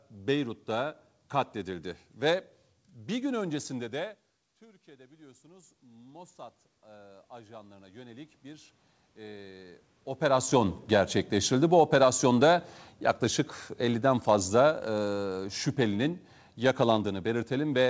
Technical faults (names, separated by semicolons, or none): automatic gain rising; automatic gain falling